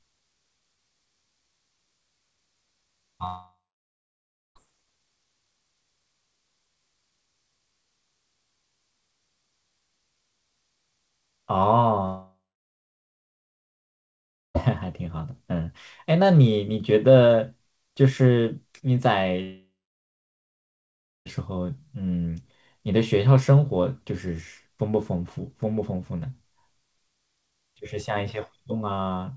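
A likely long network dropout stopped audio arriving at 3.26–4.57 s, 12.05–14.56 s and 19.42–21.27 s. Each time the last sound smears into a fading buzz, then silence lasts about 1.0, 2.2 and 1.6 s before speech returns with that stretch lost.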